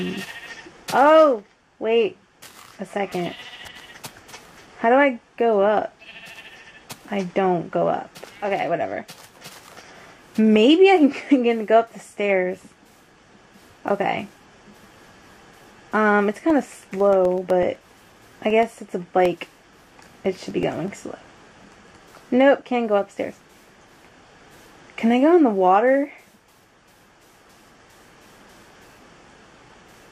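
Periodic USB or driver dropouts run from 16.38 to 22.01 s: millisecond-scale silent gaps tick every 0.125 s under signal, their strict regularity ruling out random clicks.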